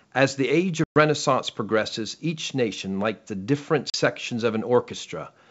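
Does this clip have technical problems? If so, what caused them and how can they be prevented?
Yes, there's packet loss on the ADPCM call. About 120 ms of the call goes silent at 0.84 to 0.97 s and about 40 ms at 3.90 to 3.96 s, each time with hard edges, and the decoder's predictor takes a moment to catch up with the sender's afterwards. A steadier network path plus a jitter buffer and proper packet loss concealment would keep those holes out.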